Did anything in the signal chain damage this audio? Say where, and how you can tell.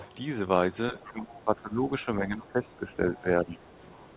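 Yes. The speech dips at 0.91–1.83 s, 2.05–2.97 s, 3.17–3.25 s and 3.44–3.59 s, up to about 15 dB. This is likely speech suppressed in double talk by the call's echo canceller.

A faint, brief second voice, well below the speech, surfaces at 1.0–1.07 s. This is likely the other side's voice leaking through after incomplete echo cancellation in call processing.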